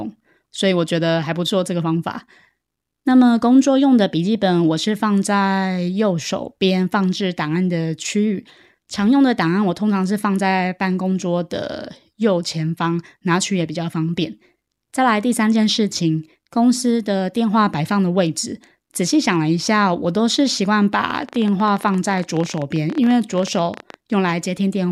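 Likely interference, or a faulty connection or supply, injects a train of clicks from 21.10 to 23.95 s: around fifty unevenly spaced pops, 17.3 per second, rising above the speech.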